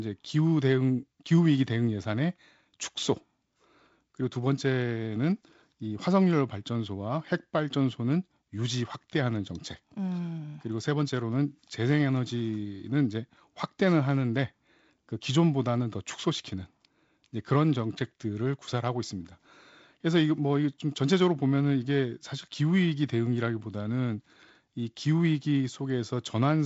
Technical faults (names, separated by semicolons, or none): none